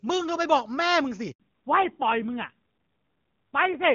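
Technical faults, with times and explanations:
1.32 to 1.40 s, handover gap: the sound stops for 80 ms while the call is passed from one network to another and no coded frames reach the decoder during the switch. The level fades within a few tens of milliseconds and stays silent until the new link starts delivering audio. Whatever was said in that span is gone. On a waveform this is a short flat line. On a spectrogram it is a narrow, fully dark vertical band across all frequencies.
1.40 s to the end, fallback to narrowband: after the handover the call drops from the AMR wideband (HD Voice) codec to the older narrowband AMR codec, so nothing above 4 kHz survives. Before the switch the HD Voice audio is clean, which points to one of its top rates. Afterwards the sound turns duller and rougher, which fits a mid-rate narrowband mode around 7.4 kbit/s. On a spectrogram the energy above 4 kHz disappears abruptly at 1.40 s, leaving a hard ceiling for the rest of the clip.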